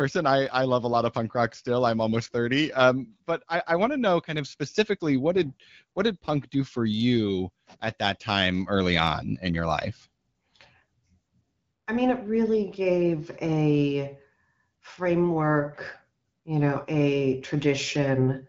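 Speech, with no technical faults to report.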